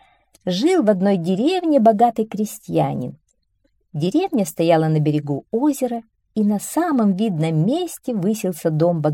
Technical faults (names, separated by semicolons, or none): none